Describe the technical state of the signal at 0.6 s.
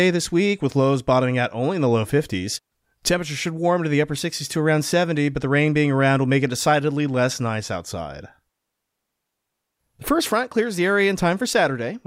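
At 0.6 s the signal is intact, with no audible fault at that moment in the speech.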